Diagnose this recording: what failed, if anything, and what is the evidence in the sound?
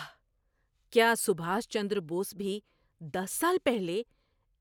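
Nothing failed in this recording.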